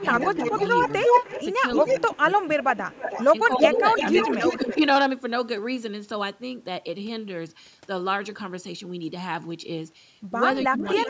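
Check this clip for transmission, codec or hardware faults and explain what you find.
Two related faults are audible, both tied to the echo canceller on a hands-free call.

Echo leak occurs from 0.01 to 3.25 s, 3.58 to 4.77 s, and 10.61 s to the end. A delayed copy of the speech comes back at 311, 322 and 352 ms respectively. It is roughly as loud as the direct speech in the first two stretches and about 10 dB lower in the last. The likely cause is a far-end loudspeaker feeding its microphone and the canceller not removing all of it, so the residue is returned.

Speech suppressed in double talk appears as dips where the echo overlaps the talker. From 1.83 to 2.72 s the level drops by about 10 dB over roughly half a second. Shorter dips follow at 3.59 to 3.84 s (about 15 dB), 4.57 to 4.77 s (about 5 dB) and 10.66 to 11.02 s (about 25 dB). These are likely the canceller failing to separate the talker from the echo and attenuating both together.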